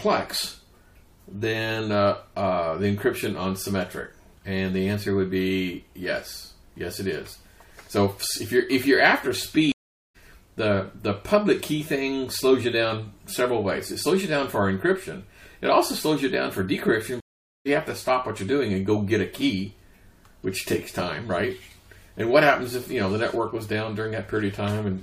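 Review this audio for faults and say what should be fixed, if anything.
The audio goes silent for 0.43 s at 9.72–10.16 s and for 0.45 s at 17.20–17.67 s, then picks up further along, skipping roughly half a second and three tenths of a second. This is a stream reconnect: the connection dropped, and a fresh decoder rejoined the stream mid-flow. A deeper client buffer with quicker, seamless reconnection would prevent it.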